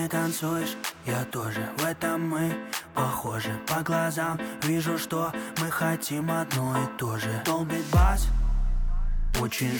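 No faults detected anywhere in the audio.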